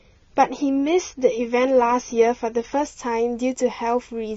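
From 0.0 to 2.87 s the speech plays from an adaptive stream starting at a low bitrate. Nothing sounds above 6.9 kHz, and the artefacts are stronger, which fits a stream around 24 kbit/s. At 2.87 s the quality jumps with no gap, as the player steps up to a version that fits about 96 kbit/s. On a spectrogram, the hard 6.9 kHz ceiling suddenly lifts, and the waveform stays unbroken across the change.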